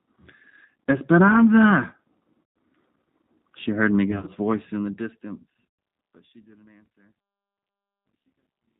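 From start to finish the speech carries the sound of the G.729 codec, here the G.729A variant at 8 kbit/s, and the damage is plainly audible. The decoder rebuilds each 10 ms frame from a vocal tract filter, a pitch predictor and a few pulses, so the speech has a rough, slightly synthetic edge. On a spectrogram, nothing appears above 4 kHz, and the harmonics look smeared and grainy rather than cleanly ruled.

The first VoIP packet loss concealed by the speech codec comes at 0.84 to 0.86 s, where 20 ms is lost. Longer losses follow at 2.43 to 2.56 s (130 ms), 4.11 to 4.30 s (100 ms lost in short runs scattered over 160 ms, none longer than 30 ms) and 5.67 to 5.79 s (120 ms). In each gap the decoder keeps repeating its last pitch and filter at falling gain, so the speech turns into a buzzy tone or a coloured noise that fades. Because each frame builds on the one before, the speech sounds weak or distorted for a short while after each gap. 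On a spectrogram these spots show flat, evenly spaced harmonic stripes where the normal pitch movement stops, and the waveform thins into a repetitive pattern. The later gaps fall within the smooth fade-out, which begins around 4 s and reaches silence at 8.8 s.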